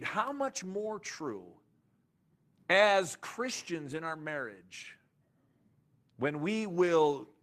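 At 0.73 s there's a brief rough patch: a lost packet rebuilt from error correction. The packet went missing, but the next one carried a low-bitrate copy, so the decoder played that instead of leaving a gap. You get about 20 ms that sounds grainier and noisier than its surroundings. It happens again from 3.91 to 3.97 s, longer this time, with roughly 40 ms rebuilt, which fits two separate packets being patched the same way.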